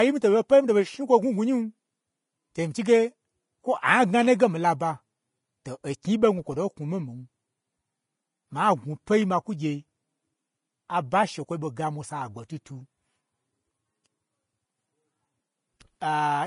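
Throughout the speech, the treble sounds hissy and grainy, with roughened tones and smeared consonant onsets, and nothing reaches above 10.6 kHz. This is likely Vorbis compression at a low setting, which fits a bitrate near 29 kbps, where coarsely quantised high-frequency detail turns into noise.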